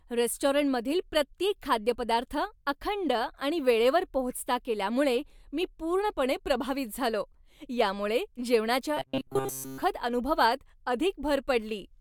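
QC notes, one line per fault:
8.97–9.83 s, robotic sound from repeated short buffers: right after "प्रभावित झालो यामुळे जेवणाच्या" the speech turns into a rigid metallic buzz near 133 Hz. This is likely from a roughly 7.5 ms block being looped while most of the real audio in that stretch is skipped.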